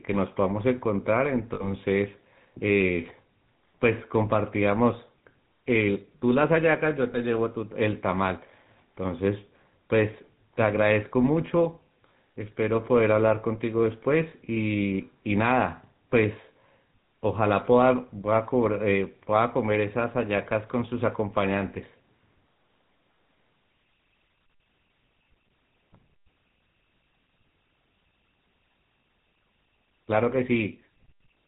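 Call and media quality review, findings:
Whole clip: buzzy, gravelly roughness on the voice, nothing above 4 kHz. Component: GSM full-rate codec, sound fits the 13 kbps mode. Mechanism: vocal-tract model driven by regular pulses, excitation kept at one sample in three, so voiced sound turns coarse and buzzy, band capped at 4 kHz. Damage plainly audible throughout.

1.54–1.72 s: voice held as a rough, metallic ring for about 60 ms. Component: lost GSM frames, concealment. Mechanism: last good frame's parameters repeated. Length fits three missing frames.
7.12–7.17 s: same metallic hold, shorter, consistent with a single 20 ms frame lost and replaced by repetition.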